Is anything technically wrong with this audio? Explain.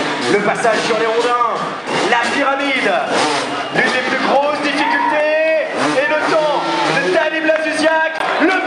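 Yes. From 8.18 to 8.23 s there is a short hole where the sound cuts out and then resumes further along, as though it had kept playing underneath. This is likely a Bluetooth dropout: audio data arrived too late for the headphones and was discarded, leaving silence until good data returned. The missing material, about 15 ms, fits a single lost packet. On a waveform it is a flat gap, and on a spectrogram it is a thin vertical blank stripe.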